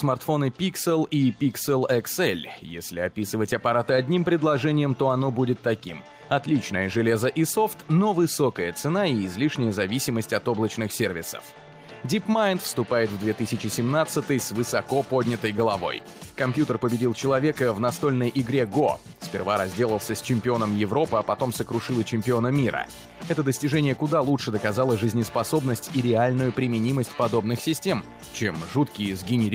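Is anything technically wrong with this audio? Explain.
No, the signal shows no technical faults, holding steady and intact throughout with nothing in the recording or playback chain disturbing it.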